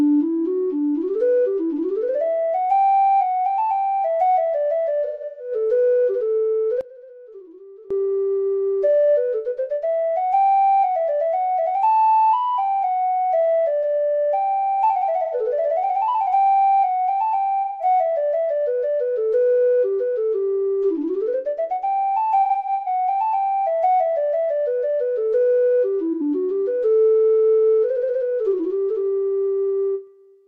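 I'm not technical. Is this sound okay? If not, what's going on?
No. At six moments the sound briefly turns smeared, hissy or hollow: 5.05 to 5.52 s, 11.66 s, 15.24 to 15.34 s, 17.63 to 17.85 s, 22.41 to 22.86 s, and 26.12 to 26.21 s. This is AAC frame loss with concealment. Small pieces of the compressed audio went missing, and the player guessed the gaps by reusing the last good sound.

From 6.81 to 7.91 s the sound suddenly drops to a much quieter version. The likely cause is one channel inverted: one side of the stereo is flipped upside down, so when both sides are combined, the shared middle of the sound cancels itself out.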